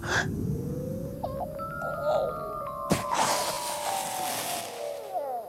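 At 1.37 to 1.40 s and again at 3.54 to 3.57 s there is Bluetooth stutter. Each time, about 29 ms of audio fails to arrive, which fits a pair of lost packets. The receiver fills the gap by replaying its last buffered slice, producing a brief repeat, and then the sound resumes further along, skipping the missing material rather than picking up where it stopped.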